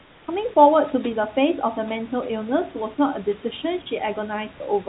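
A speech clip whose opening pause from 0.0 to 0.28 s has comfort noise in place of the background, likely because the sending side's voice detector judged the moment silent and stopped transmitting, leaving the receiver to synthesise noise. For those first 280 ms the real room noise, about 29 dB below the loud parts, gives way to a flat, featureless hiss about 4 dB quieter, before the genuine background returns with the speech, all heard through a band that stops at 4 kHz.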